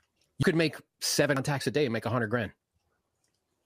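Three abrupt jumps forward interrupt the speech. The first comes at 0.43 s, just before "could make seven," and skips about a tenth of a second. The second comes at 1.37 s, between "could make seven" and "a day and make." The third comes at 2.90 s. The last two each cut roughly 150 ms. The likely cause is a dropped buffer (overrun): audio was overwritten before being read, and the surviving edges were spliced together without any gap.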